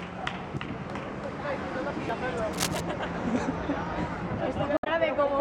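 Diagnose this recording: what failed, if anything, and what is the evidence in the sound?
Damaged data in the compressed stream at 2.34–2.37 s and 4.74–4.87 s, a codec-stage failure: corrupt frames knock the decoder out of sync, producing brief glitches.

Cable scratch noise from 2.52 to 2.81 s in the analogue wiring, about 5 dB below the signal: rustling bursts, likely from a worn connector's fluctuating contact resistance.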